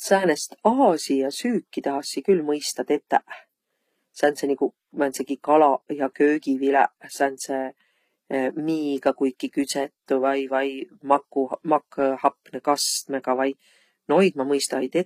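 Right through the speech there's plainly audible HE-AAC compression damage, likely from a low-rate stream around 24 kbps. The treble above the crossover sounds rebuilt rather than real, so s sounds come out gritty and lispy, and nothing survives above about 14.9 kHz.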